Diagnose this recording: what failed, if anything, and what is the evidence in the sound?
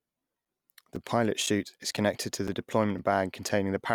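Gap between chunks, at playback or from codec padding: 6.5 ms hard-edged silences at 0.45, 0.96, 1.46, 1.97, 2.48, 2.98 and 3.49 s. The audio is delivered in 0.5 s chunks. These gaps appear as thin blank vertical stripes on the spectrogram and flat notches in the waveform.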